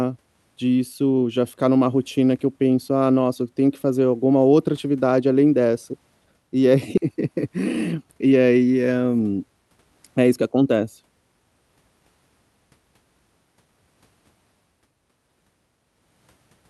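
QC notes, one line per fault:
6.97 s, skip ahead: playback jumps forward abruptly, with roughly 400 ms of speech missing and the two sides spliced with no fill. A stretch of audio was dropped while later audio was already waiting. On a waveform or spectrogram the speech rhythm visibly breaks there.
7.57–8.33 s, jitter buffer speed-up: speech runs about 7% fast at unchanged pitch, sounding slightly hurried, as the buffer trimmed roughly 70 ms in repeated pitch-period cuts to shed excess delay. A spectrogram shows harmonics at steady spacing while syllables compress in time.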